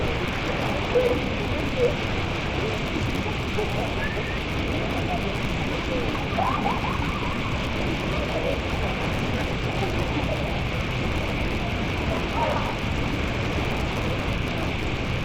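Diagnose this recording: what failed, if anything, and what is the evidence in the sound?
The sample-format conversion stage failed. The fault is interleaved audio read as planar, and it runs for the whole clip. The sound is dull and robotic, with a steady buzz at 100 Hz and no clear octave drop. That buzz rate points to blocks of 10 ms. Each block carries alternating left and right samples. The reader takes the first half as left and the second half as right. Each half plays at half speed, chopped at every block boundary.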